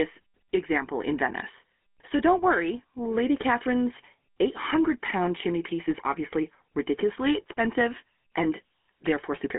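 Throughout, the speech carries GSM full-rate codec damage: a buzzy, gravelly roughness from pulse-driven vocal-tract modelling, consistent with a roughly 13 kbps phone link. A spectrogram shows energy confined to about 200 Hz–3.4 kHz, with nothing above 3.7 kHz.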